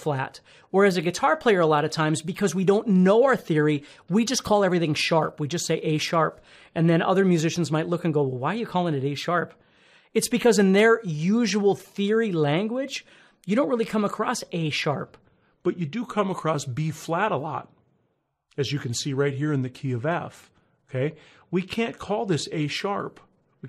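From 15.21 s to the end, there's a section at the wrong speed: the audio drops to about 0.89 times normal speed, so it drags and sits roughly two semitones lower. It's likely a playback or editing clock mismatch, with pitch and timing sliding together.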